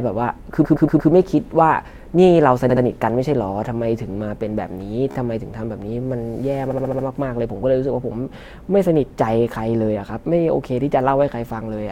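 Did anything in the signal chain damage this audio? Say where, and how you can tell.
Yes. The damage is repeated frames, at the codec or storage stage, where runs of compressed frames were duplicated before decoding. The speech stutters at 0.64–1.10 s, with a 116 ms block played four extra times, and at 2.69–2.83 s, with a 70 ms block repeated twice more. There is a brief flutter at 5.11–5.15 s, where a 15 ms block recurs three times, and a longer stutter at 6.70–7.05 s, with a 70 ms block replayed five times. Each repeat lengthens the audio by the duplicated time.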